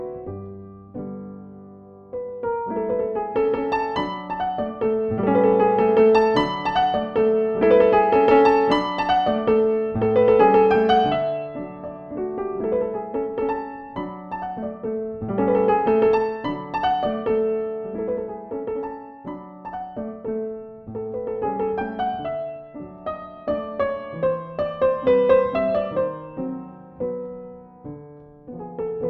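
No audible faults anywhere in the recording; nothing to flag.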